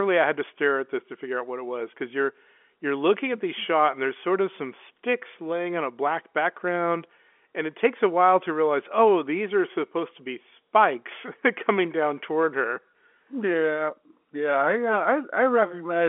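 Nothing goes wrong anywhere in this speech, which keeps the narrow band you'd expect from an ordinary telephone line, with nothing coming through above about 3.7 kHz.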